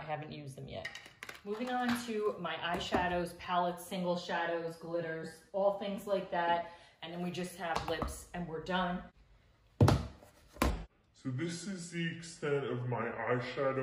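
From 10.70 s to the end at 13.82 s, a section at the wrong speed plays back at 0.705 times normal rate, dropping the sound roughly seven semitones and slowing it audibly. The likely cause is that portion being clocked or resampled at the wrong rate.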